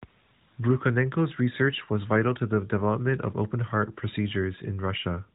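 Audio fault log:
No faults found in this speech clip; the narrowband AMR mobile codec path is working normally, with nothing passing above 3.8 kHz.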